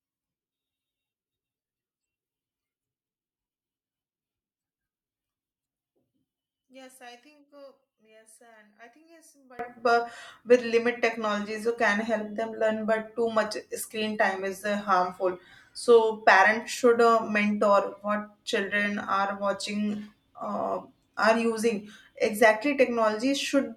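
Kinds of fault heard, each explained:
One channel inverted: until 9.59 s, before "uh with", speech sinks about 27 dB to a faint trace, likely mono cancellation, not a silent dropout.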